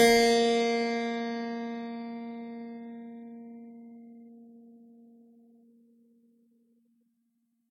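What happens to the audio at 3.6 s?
At 3.6 s the music has likely been through transcoding between lossy codecs, low-bitrate MP3-like coding re-encoded twice, leaving stacked artefacts and nothing above 18.3 kHz throughout.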